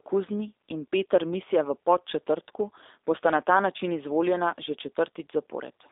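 The speech passes through a G.729 codec for its whole length, rebuilt at a rate that sounds like 8 kbit/s from a filter model and sparse pulses, with the line limited to 300 Hz to 3.7 kHz. Nothing above 3.7 kHz survives, and the voice sounds plainly rough and synthetic.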